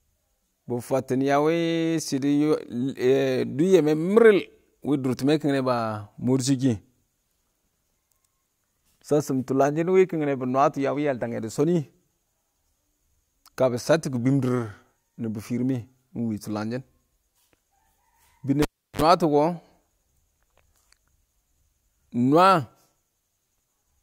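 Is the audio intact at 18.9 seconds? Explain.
No, a cable pulled and plugged in disrupts it from 18.62 to 19.02 s. A pop cuts the speech to near silence for about 0.34 s, then 50 Hz mains buzz lasts 53 ms while only the plug tip touches, and a second pop restores the sound.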